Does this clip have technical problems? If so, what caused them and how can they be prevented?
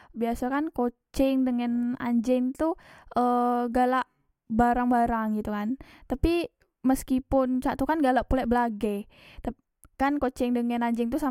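Yes. A resampler restarted on every block runs throughout, heard as a 25 Hz buzz under the speech. Each 40 ms block was converted from 44.1 to 48 kHz without its neighbours' samples, leaving an error at every edge. Keep one continuous resampler state across blocks.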